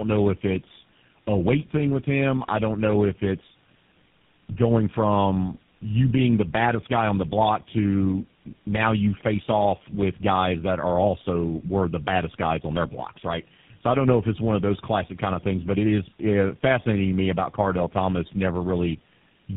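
Tandem speech coding runs through the whole clip: the speech was decoded and re-encoded by three low-rate codecs in a row, consistent with a GSM full rate, AMR-NB, GSM full rate chain. Each stage compounds the last, leaving rough, muffled, warbly speech with nothing above 3.7 kHz.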